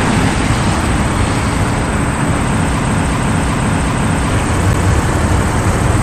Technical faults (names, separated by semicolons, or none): broken-record loop; CD skip